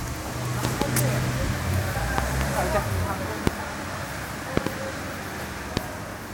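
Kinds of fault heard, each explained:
Loud pop: sharp pops jump out at 0.65–0.84 s, 2.18–2.43 s and 4.57–4.69 s, each a quick pair, with single pops at 3.47–3.49 s and 5.77–5.79 s. Each peaks around 25 dB above the surrounding audio, which carries on beneath. The likely cause is a sudden voltage step or pulse, from a plug, switch, static discharge or driver glitch, added to the signal and shaped by the circuitry after it into a brief thump.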